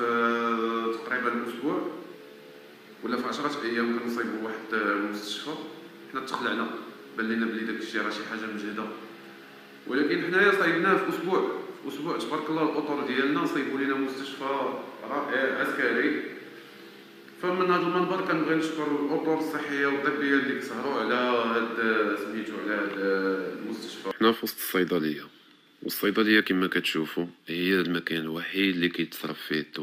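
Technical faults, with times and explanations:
No technical faults can be heard anywhere in this clip.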